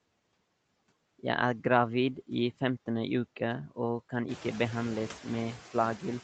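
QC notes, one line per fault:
Throughout: noise suppressor artifacts. The background noise is pulled down by about 17 dB between phrases and swells back up under the speech. The room noise climbs by about 13 dB around 4.5 s.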